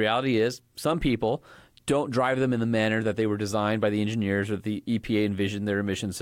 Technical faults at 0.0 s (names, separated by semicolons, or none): none